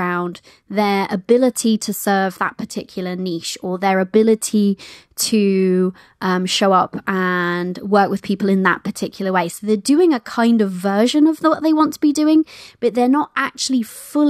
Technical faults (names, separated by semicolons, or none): none